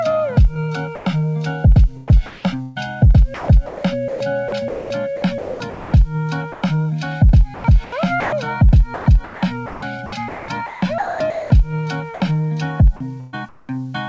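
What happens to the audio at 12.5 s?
Nothing goes wrong at 12.5 s: the audio carries on intact through that moment, with no dropout, glitch or break.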